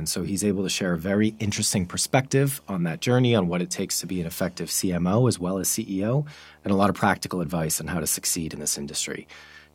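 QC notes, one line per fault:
Throughout: video or display buzz, a steady 75 Hz buzz with fizzy hash riding above it, sitting roughly 35 dB under the speech. A screen or video cable is leaking its refresh into the audio path; the 75 Hz field rate, rather than 50 or 60 Hz, separates it from mains hum.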